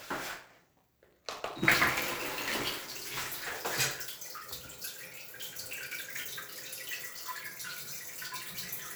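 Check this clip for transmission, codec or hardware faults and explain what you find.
There's one fault here, and it's a hardware-side one: buffer tearing, from the start to about 3.58 s. The writer and the playback hardware have drifted so they cross inside each buffer period. A small slice of every buffer plays audio from roughly 15 ms earlier, with hard joins either side. That repeats at 188 Hz, which fits a 256-sample buffer, so you hear a steady robotic buzz riding on the sound.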